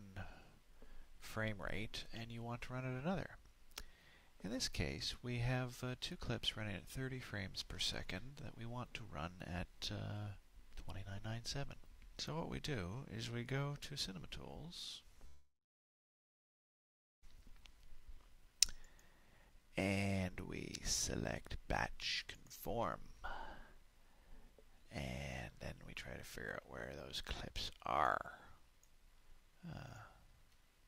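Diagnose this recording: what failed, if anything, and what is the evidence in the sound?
From 15.27 to 17.25 s the last sound is drawn out and then fades to silence for most of that 1.95 s before the audio resumes where it stopped, with nothing missing. This is likely a call audio freeze: packets stalled on the network, the jitter buffer ran dry, and a gap was inserted.

The audio then runs hurried at unchanged pitch: about 118% speed from 17.41 to 20.35 s, 112% from 21.08 to 24.85 s, and 115% from 26.69 to 30.86 s. This is a jitter buffer speed-up. The receiver trimmed short pitch-period pieces repeatedly, roughly half a second, half a second and 0.7 s in turn, to drain the delay the stall built up.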